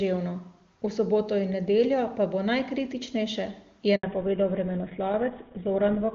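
Up to about 3.95 s the speech comes through clean and wideband, with the clarity you'd expect from the AMR wideband (HD Voice) codec at its top rate, something like 23.85 kbit/s. At 3.95 s there's a handover gap: the call gets passed from one network to another and no speech arrives for about 80 ms. The sound dies away within a few tens of milliseconds and stays silent until the new link picks up at 4.03 s. Whatever was said in that window is simply gone.

When the sound returns at 4.03 s, there's a fallback to narrowband. The call has landed on an older codec, most likely GSM full rate at around 13 kbit/s, and it stays there for the rest of the clip. Nothing above 4 kHz survives, so the sibilants dull and the airy top end disappears, and from 4.03 s to the end the speech sounds duller, boxier and rougher than before the gap.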